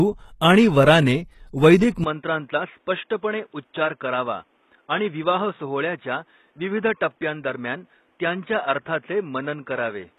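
Throughout the speech, the treble is synthetic and stops at 12.3 kHz. The codec damage is plainly audible. This is likely HE-AAC compression at a low rate, around 16 kbps. Upper bands are rebuilt from copied lower ones, so harmonics do not line up.

At 2.04 s, just after "आणि वराने वैदिक", the input switched to a poorer device, likely. There is no gap at the switch. The band now ends at 3.8 kHz, so the sound turns dull. Level drops about 5 dB, and new noise sits roughly 40 dB below the speech.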